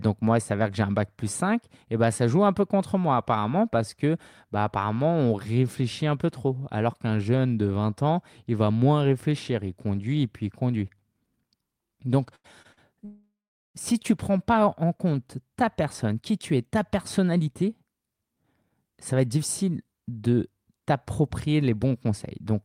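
Speech, with three short stalls from late packets at 12.35, 12.62 and 12.73 s. Each time the last sound is held, for 88, 26 and 42 ms, then resumes. A call audio freeze follows from 13.05 to 13.77 s. The sound decays into about 410 ms of silence, adding a 700 ms gap, likely from packets held up in transit. From 16.14 to 22.07 s a jitter buffer speed-up runs the speech at 109% with unchanged pitch. Small pitch-period pieces totalling roughly half a second are trimmed, so it sounds hurried.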